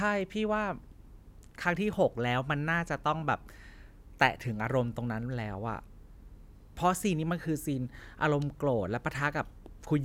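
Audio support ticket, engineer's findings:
Listened through the speech recording and nothing stood out as a fault.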